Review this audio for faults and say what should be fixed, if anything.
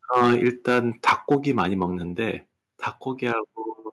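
Microphone overload is audible in three stretches: 0.13 to 0.8 s, 1.07 to 1.84 s, and briefly at 3.27 to 3.33 s. The loudest syllables have a harsh, crackling edge where the waveform tops are flattened. The input likely ran hot enough to drive peaks past the converter's limit, by about 9 dB, 7 dB and 2 dB respectively. A few percent of samples are clipped in the first stretch and a small fraction in the later ones. Set the microphone's input gain so that the loudest speech peaks sit well below full scale.

The microphone volume stepped down twice, at 0.35 s and at 1.35 s, each time inside a distorted passage. The speech and the background drop together by about 2 dB and then about 3 dB. This is likely the call software's automatic gain control reacting to the clipping and lowering the device input level in single steps. The reductions are too small to stop the overload, which continues after both steps. 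Disable automatic input-level adjustment once a correct fixed gain has been set, so the level stays steady.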